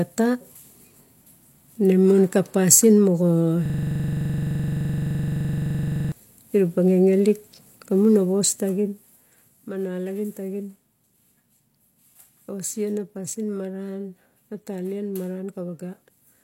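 At 3.66 s, right after "mon ka pasin moga", a system hang loop sets in until 6.12 s. The 42.67 ms buffer, which fits a 2048-sample ring, repeats nearly sixty times, producing a coarse 23.4 Hz buzzing stutter while the driver stalls.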